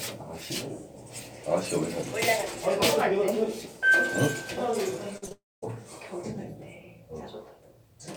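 Short concealed packet loss at 5.17 to 5.24 s, 5.26 to 5.29 s and 5.29 to 5.32 s: lost fragments of 40, 20 and 20 ms were patched by extending the preceding sound, leaving brief smeared wobbles. A long network dropout follows from 5.32 to 5.64 s: the sound continues as a fading buzz or hiss, then about 200 ms of near-silence, and returns with roughly 300 ms missing, likely because no audio arrived.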